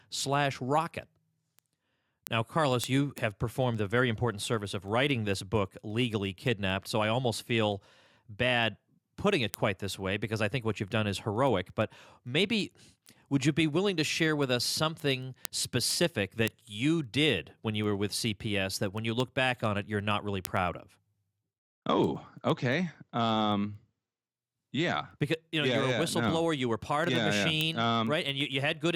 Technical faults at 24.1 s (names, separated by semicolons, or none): word clock ticks